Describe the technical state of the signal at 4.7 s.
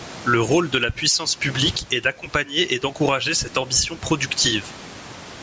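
At 4.7 s the speech shows gain pumping, which runs through the whole clip. The likely cause is a microphone gain set far too high, with a fast limiter pulling the level down on each loud syllable. The room noise sits about 34 dB under the speech, and the gain swings by roughly 15 dB. On a waveform the envelope looks flattened and squashed. On a spectrogram there is a clean cutoff at 8 kHz.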